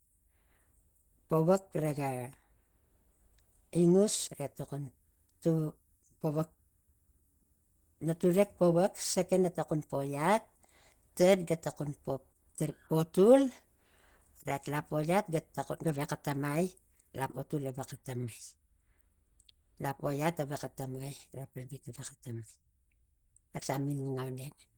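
Throughout the clip the speech sounds hoarse, grainy and somewhat muffled, with plainly audible coding damage, even though content still extends to 20.1 kHz. This is likely Opus compression running in its hybrid speech mode, and the roughness fits a low bitrate around 16 kbps.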